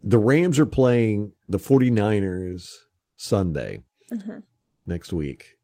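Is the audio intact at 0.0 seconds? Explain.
Yes, the audio is intact at 0.0 seconds, with no fault present at that moment.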